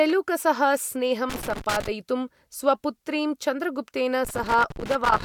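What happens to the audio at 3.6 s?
Nothing goes wrong at 3.6 s: the speech carries on intact through that moment, with no dropout, click or other fault to be heard.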